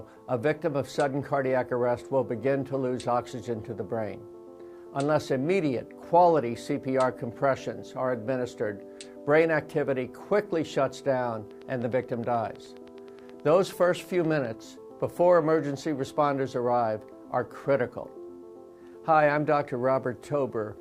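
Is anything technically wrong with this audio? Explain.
Yes. From 11.51 to 14.46 s a train of clicks ticks steadily at about 9.5 per second: around thirty near-identical pulses, roughly as loud as the sound itself, likely from electrical interference or a faulty connection. A waveform shows evenly spaced spikes, and a spectrogram shows thin vertical broadband lines.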